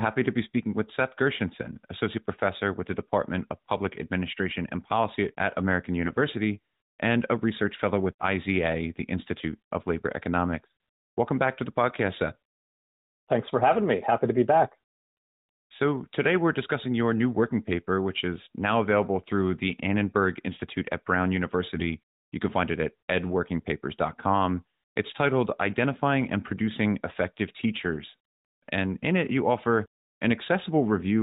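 At 6.04 to 6.13 s and again at 21.76 to 21.83 s there are AMR bit errors. Each burst lasts under a tenth of a second, which fits roughly three 20 ms frames, with a few percent of the weakly protected bits flipped. Pitch and loudness hold, but the excitation pulses and fine spectral values are misplaced, so the sound turns briefly hoarse and gargly. This happens within the band-limited, lightly coloured AMR narrowband output, which fits a 12.2 kbps mode.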